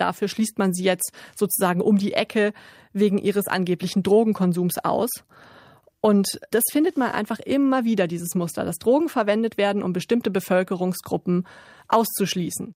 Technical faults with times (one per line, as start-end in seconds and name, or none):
none